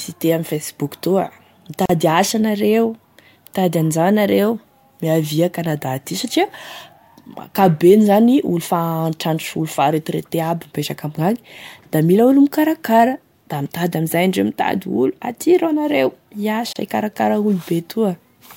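Separately encoded pieces were joined untrimmed, leaving a gap at a join of encoded pieces: about 39 ms of silence at 1.86 s before "asa anareo", and about 32 ms at 16.73 s, each briefly breaking the speech.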